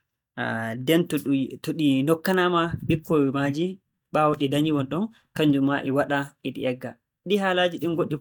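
No technical faults are audible.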